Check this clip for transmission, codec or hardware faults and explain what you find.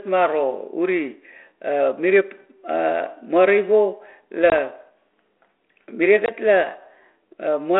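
There's packet loss on this ADPCM call, twice, riding on a G.726 link at 32 kbit/s that holds to the usual 300 Hz to 3.4 kHz telephone band.

At 4.5 to 4.58 s and again at 6.26 to 6.31 s, about 20 ms of audio, roughly one packet, drops out to a hard-edged hole. The receiver's predictor and step size then disagree with the sender's, so sound resumes briefly slightly distorted before settling.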